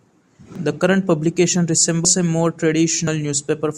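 A short speech clip with three quick jumps where the audio skips forward, at 0.56 s, at 2.05 s between "current publication" and "a more", and at 3.07 s after "a more". Each is likely a dropped buffer (overrun), with roughly 40 ms, 150 ms and 40 ms skipped.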